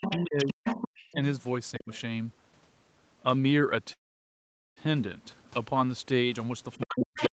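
The clip is speech over a call, with a bandwidth that stops at 8 kHz. A second voice leaks in from 0.01 to 1.14 s, 1.78 to 2.01 s and 6.80 to 7.33 s. This is the other side's voice leaking through. It is loud at the start and end, only about 5 dB under the talker, and faint around 1.8 s. Its likely cause is an echo canceller that left part of the loudspeaker signal in the microphone. At the same moments the talker's own speech sinks. It drops sharply from 0.17 to 0.65 s, by roughly 40 dB. It dips less deeply from 1.79 to 1.89 s, by about 15 dB. It falls hard again from 6.78 s to the end. This is speech suppressed in double talk. Both sides were talking at once. The canceller likely could not tell the talker from the echo and turned everything down. From 3.93 to 4.78 s the audio stalls. A short tail of the last sound decays, then about 0.8 s of silence follows. This is a call audio freeze. 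The speech resumes exactly where it stopped, so nothing is lost. Instead a gap of about 0.83 s is inserted. The likely cause is delayed packets draining the jitter buffer.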